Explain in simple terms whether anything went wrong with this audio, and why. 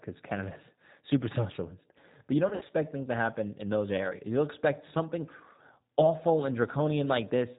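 The whole recording went through the G.729 codec, a phone-call compressor that squeezes speech into very little data. It doesn't send the sound itself. It sends a rough recipe for the throat shape and pitch, plus a few pulses, and the far end rebuilds the voice from that. Everything above 4 kHz is cut off. The damage is plainly audible here: the voice sounds muffled, a bit rough and slightly robotic from start to finish.

There is also VoIP packet loss concealed by the speech codec, from about 2.49 to 2.73 s, just before "things to happen in". Pieces of the call went missing, about 100 ms in total, scattered over roughly 200 ms. The longest single gap was about 60 ms. The decoder filled each hole by guessing, repeating its last pitch and fading it. You hear a brief stretch of buzzy tone or coloured noise, and the voice stays weak for a moment afterwards.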